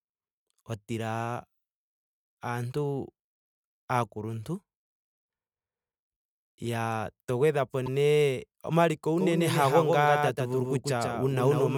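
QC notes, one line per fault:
7.85–7.88 s, repeated frames: right after "yaa to gwedhapo" the speech stutters as one 26.1 ms block plays a second time, stretching the audio by 26.1 ms. The block length fits a single MP3 frame of 1152 samples at 44.1 kHz. On a waveform, two identical short segments sit back to back.
9.17 s to end, doubled audio track: from here the speech gains an out-of-step twin, a full-band copy about 5 dB quieter trailing around 150 ms behind. That most likely comes from a second, slower capture path mixed in with the main one. The copy carries no reverb tail or room colouring and switches on abruptly, giving a hard slapback effect. On a spectrogram, every syllable's harmonic pattern reappears at fixed offset, slightly fainter; the waveform shows overlapping envelopes with a sudden onset at 9.17 s.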